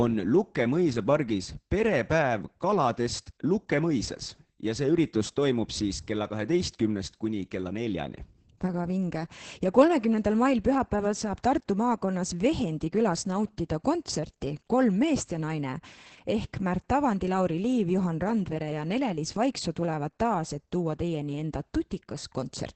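Opus voice compression runs for the whole clip, with heavy damage. The speech sits in the SILK linear-prediction mode at wideband, so nothing is left above about 8.6 kHz and sibilants lose their air. At what sounds like roughly 10 kbps, the excitation is coded coarsely, giving the voice a muffled, hoarse texture with a slightly robotic edge, as the predictor rebuilds speech from a sparse residual.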